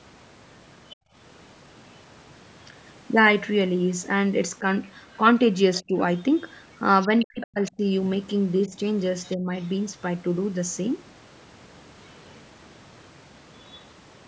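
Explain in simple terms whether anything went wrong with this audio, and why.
A few things went wrong, all down to the call's echo handling. First, the other side's voice leaking through: faint traces of a second voice at 0.9 s, 4.83 to 7.47 s, and 8.62 to 9.67 s, likely from the loudspeaker sound sneaking past the echo canceller. Right after the first one, from 0.96 to 1.15 s, the background gets gated by the echo canceller and drops to near silence for about a fifth of a second. Then there's speech suppressed in double talk, likely because both sides spoke at once: the talker dips clearly around 5.82 to 5.95 s, then cuts out in bits between 7.08 and 9.5 s.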